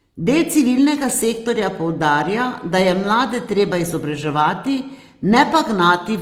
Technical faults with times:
0.00-6.21 Opus compression

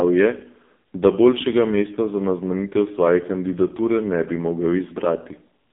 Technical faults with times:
0.00-5.72 AMR narrowband mobile codec

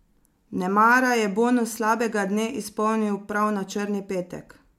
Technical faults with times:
none

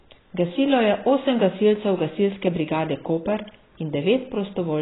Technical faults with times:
0.00-4.81 AAC compression

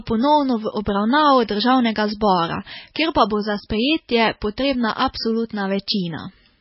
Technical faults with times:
0.00-6.60 MP3 compression

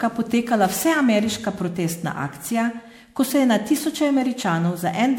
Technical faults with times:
0.00-5.18 generation loss

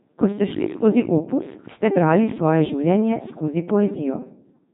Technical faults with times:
0.00-4.73 Codec 2 vocoder

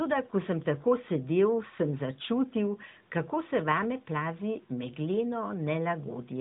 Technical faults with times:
none

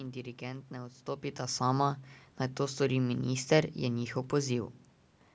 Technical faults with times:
none

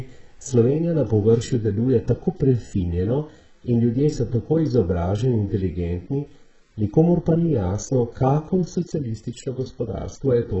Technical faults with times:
0.00-10.60 HE-AAC compression

